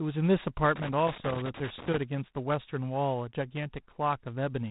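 Across the whole speech clip runs G.726 ADPCM damage, plainly audible. Each sample is sent as a small coded difference from a running prediction, and with so few bits the leftover error becomes a gritty, rasping hiss that swells and fades with the speech level. This makes it distinct from steady background noise, which would stay put in the pauses. The grain fits 24 kbit/s coding, and nothing passes above 3.8 kHz, giving a narrow telephone tone.

From 0.76 to 1.97 s a loose connector crackle breaks in: an irregular burst of crackle and scratching lasting a little over a second. A worn or dirty contact was making and breaking as it shifted, chopping the signal on and off. Unlike the codec hiss, it arrives in ragged clusters. It also differs from digital dropouts, which leave clean silent gaps rather than this rough, uneven scraping.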